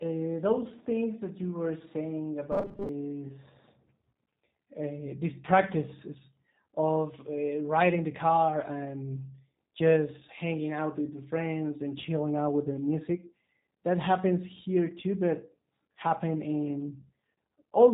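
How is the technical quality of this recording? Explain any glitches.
The technical quality is limited. Plainly audible low-bitrate codec damage runs through the whole recording, and there is one short robotic glitch.

The G.729 codec damage is present from start to finish, and it is plainly audible. Nothing above 4 kHz survives, so the speech sounds narrow and muffled. The codec rebuilds each 10 ms stretch from a vocal tract model, a pitch predictor and a few pulses. That leaves the voice rough and slightly synthetic. The sound fits an 8 kbit/s G.729 stream.

From 2.52 to 2.89 s, just after "that you were saying", the voice turns robotic. It becomes a rigid, metallic buzz at 200 Hz that still loosely tracks the speech. The likely cause is repeated short buffers. New audio arrives too late, so the last few milliseconds are replayed while real audio is skipped. About half of this stretch seems repeated. 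A 200 Hz buzz points to roughly 5 ms chunks looping.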